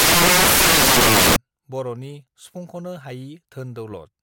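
Samples built from the wrong bytes run from 0.00 to 1.36 s of this speech clip, just before "बरनि सुफुंखनो". Each sample's bytes are assembled out of order or misaligned, so the rapidly varying low bits dominate, producing loud, harsh broadband noise.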